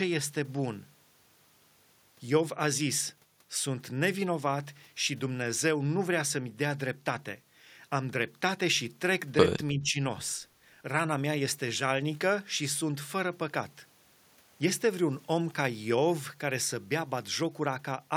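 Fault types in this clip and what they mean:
Speech suppressed in double talk: from 9.73 to 9.96 s the speech sinks by roughly 10 dB for about a fifth of a second and then recovers, rather than vanishing outright. This is likely an echo canceller that heard both sides at once, could not tell the near voice from loudspeaker echo, and turned everything down. Unlike a packet dropout, the sound is attenuated and continuous, not replaced by silence or a glitch.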